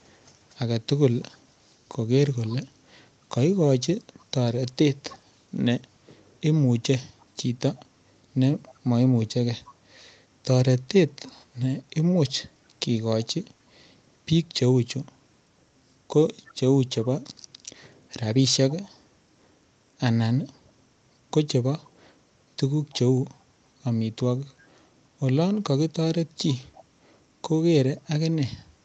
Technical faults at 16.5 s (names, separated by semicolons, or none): echo leak